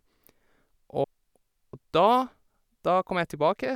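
At 1.04 s the speech jumps ahead by roughly 300 ms: compressed frames skipped, about ten 32 ms frames lost or rejected.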